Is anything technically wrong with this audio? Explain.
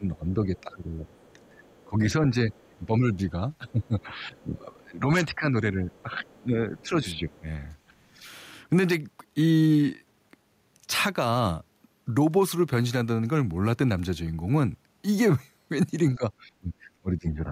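Yes, there are two related echo-control faults.

Speech suppressed in double talk runs from 0 to 8.26 s and again from 16.15 s to the end. The talker's voice dips, by about 15 dB at worst early on and about 20 dB near the end, for roughly five seconds and one second in total. The likely cause is an echo canceller that couldn't separate local speech from far-end echo and so attenuated both.

The other side's voice leaking through appears at 0.57–0.61, 1.2–1.84, 2.53–2.77, 3.69–4.42 and 5.97–6.82 s. It is a faint second voice sitting roughly 30 to 40 dB under the speech. It likely comes from loudspeaker playback that wasn't fully cancelled at the microphone. Unlike room reverberation, it is a separate talker rather than a delayed smear of the main voice.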